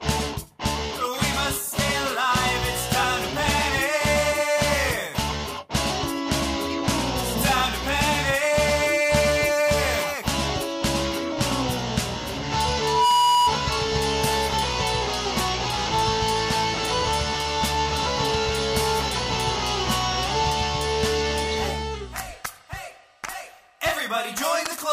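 At 12.78 s a loudspeaker feedback squeal begins and runs until 13.56 s. A microphone is picking up the loudspeaker it drives, and around 974 Hz the loop gain rises above unity, so that frequency reinforces itself on every pass. It swells over roughly a third of a second into a steady, piercing tone that sits about 5 dB above the rest of the sound, then stops.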